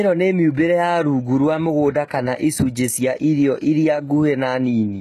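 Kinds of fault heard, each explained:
HE-AAC compression: The whole clip carries plainly audible coding damage, most likely from HE-AAC. Only the lower spectrum is properly coded. The treble is rebuilt from copied lower bands, so it does not match the real harmonics. Nothing reaches above 12.3 kHz, which fits a bitrate near 16 kbps.
pre-echo: From 2.08 to 2.10 s, a short hiss runs about 27 ms ahead of a sharp attack. The codec spreads its noise evenly over a whole block. That noise fills the quiet moment before the attack, so the onset sounds soft and smeared.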